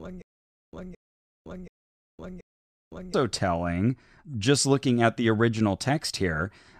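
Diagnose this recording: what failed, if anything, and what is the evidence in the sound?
A playback stage that stalled from the very start of the file, with the stream likely starving and replaying its last buffered fragment at each retry, produces a stutter with silent gaps. From 0.00 to 3.14 s the same 220 ms burst of speech repeats four times, each followed by about 510 ms of dead digital silence, giving a steady 729 ms cycle. The speech that should have filled those gaps never arrives and is lost.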